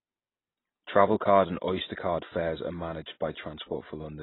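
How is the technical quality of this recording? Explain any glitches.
Pretty rough, honestly. The speech sounds heavily coded all the way through, dull and band-limited with nothing above about 3.9 kHz, which points to a very low bitrate, around 16 kbps.

The likely culprit is AAC compression throughout. At that rate the encoder chops off the top end and quantises what's left so coarsely that parts of the spectrum go missing or get patched, so sibilants turn fizzy and sustained sounds warble and smear.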